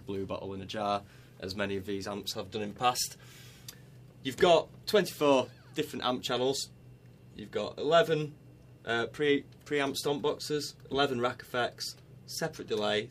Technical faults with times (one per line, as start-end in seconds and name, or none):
none